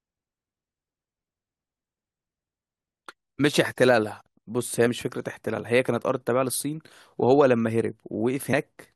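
A speech recording with two short bursts of damaged data in a compressed stream, at 4.85 to 4.87 s and at 8.52 s. Corrupted bytes make the decoder misread those frames and lose sync while it hunts for the next frame header, producing brief glitches.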